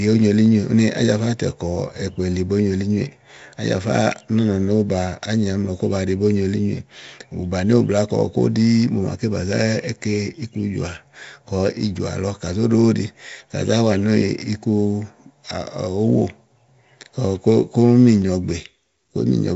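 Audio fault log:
throughout 4-bit ADPCM compression. Heavy gritty hiss follows the speech level and roughens sharp onsets. Nothing above 7.7 kHz, which fits a 64 kbps stream.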